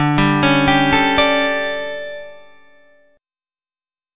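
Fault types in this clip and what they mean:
No audible faults detected.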